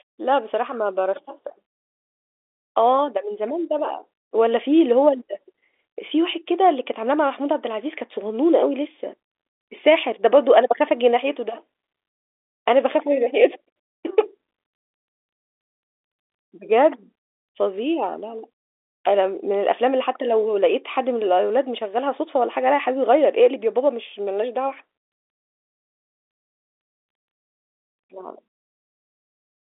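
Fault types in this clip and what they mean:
No faults found in this speech clip; it carries an intact G.711 telephone channel with a narrow line band and nothing above about 3.8 kHz.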